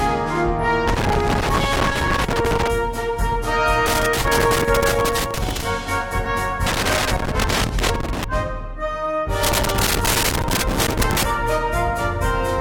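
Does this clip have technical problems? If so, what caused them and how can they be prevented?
Yes. Bursts of irregular crackle and scratching break up the sound from 0.88 to 2.68 s, 3.86 to 5.65 s, 6.66 to 8.24 s and 9.43 to 11.23 s. This is loose connector crackle: a worn or dirty contact in a plug or jack keeps making and breaking as it shifts, chopping the signal on and off and adding pops from any DC on the line. Cleaning or replacing the connectors and securing the cables would prevent it.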